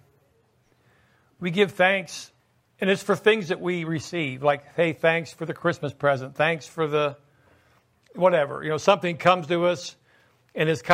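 No technical faults can be heard.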